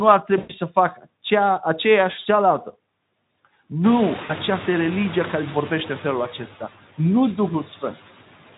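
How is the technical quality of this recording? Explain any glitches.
The recording has two real problems: a noise suppressor working on it the whole way through, and three short dropouts where packets went missing.

The noise suppressor artifacts run throughout. It pulls steady background noise down by about 17 dB, so the noise dips in the gaps and swells back under speech.

VoIP packet loss concealed by the speech codec shows up at 0.37–0.53 s, 2.19–2.26 s and 4.23–4.32 s. The decoder stretches its last sound into a buzzy tone or coloured noise that fades, and the speech stays weak briefly afterwards. The first gap covers about 120 ms and the others about 60 ms, which fits runs of lost 20 ms frames.

The room noise gets noticeably louder around the four-second mark, which gives the suppressor more to chew on from there. The light Speex coding underneath is just the codec doing its normal job.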